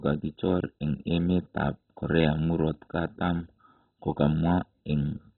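From start to finish the speech sounds dull and muffled, with nothing above 4 kHz. A gurgling, granular roughness runs through it. The likely cause is heavy MP2 compression. The coder splits the sound into equal sub-bands and shares out bits, and here there are far too few. Every upper band is switched off. The bands left are coarsely quantised and flicker as the bits run short. That fits a very low bitrate.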